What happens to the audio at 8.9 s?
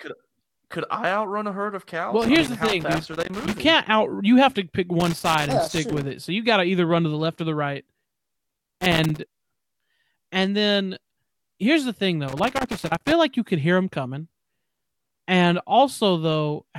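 At 8.9 s the speech is hit by loose connector crackle, running from 8.50 s to 9.23 s. A worn or dirty contact is rapidly making and breaking, chopping the signal, which comes through as an irregular burst of scratchy crackle.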